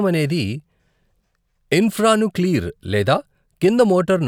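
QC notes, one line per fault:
No faults heard in this speech clip on review.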